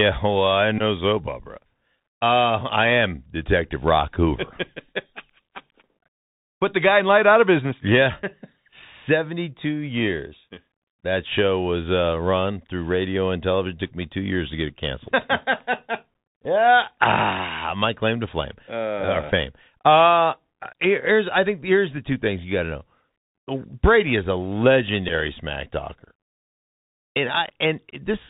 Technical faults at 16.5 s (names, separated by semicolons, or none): Bluetooth CVSD headset codec; Bluetooth headset packet repeated